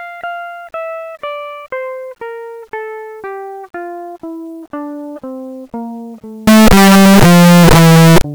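From 6.47 s to 8.21 s the music becomes very loud, harsh distortion, with quiet moments as loud as the rest. Signed and unsigned mixed up is the likely cause: each zero crossing leaps the full range, so the waveform becomes a dense, uniformly tall block and the spectrogram floods with broadband noise.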